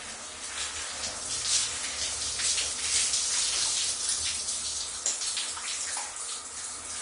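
Throughout the clip, nothing reaches above 10.6 kHz, and the remaining treble is hissy and grainy, with roughened tones and softened attacks. This is likely Vorbis compression at a low setting, consistent with roughly 34 kbps, where coarse treble quantisation replaces fine detail with noise.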